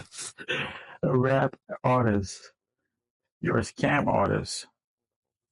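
From start to finish the sound is dull and granular, with a plain gurgle under it: MP2 compression is the likely cause. Layer II splits the signal into 32 sub-bands and shares out a tight bit budget, so the upper bands drop away and those left are coarsely quantised. The damage is plainly audible and fits a low rate of around 80 kbps. A spectrogram would show a ragged top edge, with blocks of high frequencies flickering on and off.

From 0.83 to 0.97 s comes a short burst of DAB burbling, a few watery blips laid over the sound. Bit errors have slipped past the error correction into the MP2 data, so corrupted samples put short blips of noise into single sub-bands and corrupted scale factors make sub-bands leap in level for up to a frame. It happens again, longer and rougher, from 3.96 to 4.28 s, which suggests a heavier error rate, roughly half a percent. On a spectrogram both show as isolated rectangular patches of energy in narrow bands, each at most a frame long. 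The waveform shows brief irregular swells and spikes.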